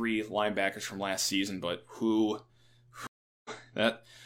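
At 3.07 s a stream reconnect cuts 0.38 s of silence, a blank spectrogram column, then a fresh decoder resumes roughly 0.3 s further on.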